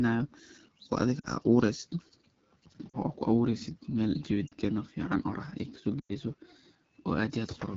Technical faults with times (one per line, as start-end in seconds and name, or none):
0.00-7.76 AMR wideband (HD Voice) codec
1.19-1.26 lost AMR speech frames
2.90-2.97 lost AMR speech frames
4.48-4.54 lost AMR speech frames
6.00-6.13 lost AMR speech frames